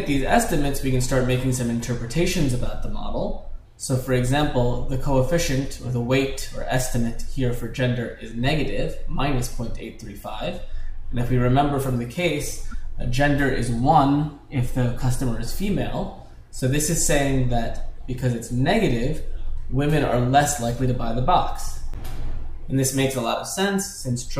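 At about 12.66 s the audio briefly lurches forward, with the affected stretch running to roughly 12.75 s. It's a classic case of compressed frames skipped. Around 20 ms of material simply never plays, either because frames went missing from the file or the decoder threw them out as damaged.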